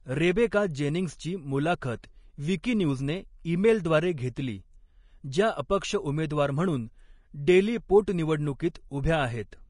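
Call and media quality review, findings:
Vorbis compression, throughout: hissy, grainy top end with roughened speech tones and softened consonant attacks, and nothing above 10.5 kHz. Likely a Vorbis encode at low quality. The encoder lowered its cut-off and quantised the remaining treble so coarsely that fine detail turned into noise of similar energy. The damage is plainly audible and fits a low bitrate in the region of 33 kbps.

Pre-echo, at 0.50 s, 2.63 s and 8.06 s (the last just after "अपक्ष उमेदवार म्हणून डेली"): a brief hiss leads each sharp onset by 10 to 13 ms, and the attack sounds smeared. A transform codec spreads its quantisation noise across a whole block, so noise sized for the loud attack late in the block also fills the quiet moment before it.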